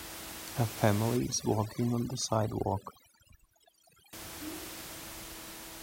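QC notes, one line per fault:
1.17–4.13 s, overdone noise removal: across this stretch the background drops and breaks up into twinkling specks, and the speech's quieter parts are dulled or gone. Noise reduction set far too hard is suppressing each frequency band that sits close to its noise estimate, so the room noise, only about 12 dB below the speech, takes low-level speech detail with it as bands blink on and off.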